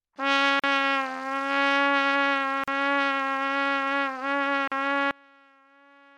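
At 0.60–0.64 s, 2.64–2.68 s and 4.68–4.72 s, a gap at a join of encoded pieces drops the sound out for about 40 ms, every 2.0 s. Separately encoded segments kept their encoder delay and end padding. Each gap shows as a flat waveform notch and a blank vertical stripe on the spectrogram, with slightly smeared edges.

From 5.11 s to the end, the level falls by about 30 dB and only a faint residue remains, with the spectrogram going almost dark. The likely cause is one channel inverted, so the shared content cancels when the channels are summed, leaving only their small difference.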